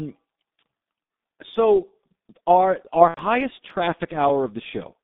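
Throughout, the speech carries heavy G.723.1 codec damage. The band runs only from about 150 Hz to 3.7 kHz, and the sound is muffled, hoarse and smeared at consonants, which fits a bitrate near 6 kbit/s. A spectrogram shows an empty top above 3.7 kHz and coarse, blocky formant tracks.

From 3.08 to 3.20 s, just after "so our our", VoIP packet loss is concealed by the speech codec. The decoder fills about 90 ms, consistent with three lost 30 ms frames, by repeating its last pitch and filter at falling gain. This stretches the sound out and fades it, and it mutes by the third lost frame. On a spectrogram that stretch shows a frozen, unchanging spectrum, and the waveform shows a tapering envelope.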